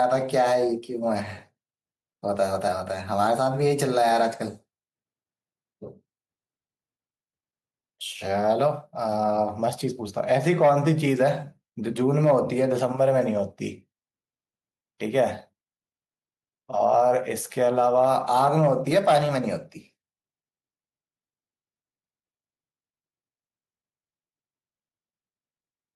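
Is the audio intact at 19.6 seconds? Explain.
Yes, the speech at 19.6 seconds comes through intact, with no dropout, glitch or other fault at that moment.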